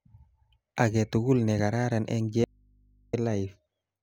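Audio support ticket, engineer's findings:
Audio dropout to a faint residue, 2.44–3.13 s. Speech cuts abruptly for 0.69 s, leaving mains hum far below normal level. Likely a signal break upstream with the input left open.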